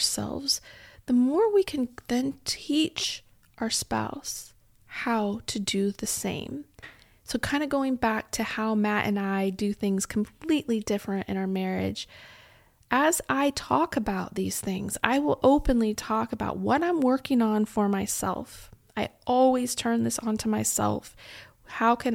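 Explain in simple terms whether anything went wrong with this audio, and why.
Listening to the recording, nothing stood out as having gone wrong with the speech at any point.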